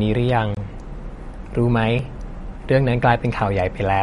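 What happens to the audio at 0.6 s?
Just before that moment, from 0.55 to 0.57 s, there is a block of digital silence. The audio drops to zero for about 23 ms, which fits a 1024-sample buffer left unfilled. The edges have no fade, so the sound cuts out and back in a brief hole.

Around it, MP3 compression is the likely cause of a dull, watery quality. Nothing is left above 11.2 kHz. Weak frequency lines flicker from frame to frame. The damage is plainly audible and points to a low bitrate near 49 kbps.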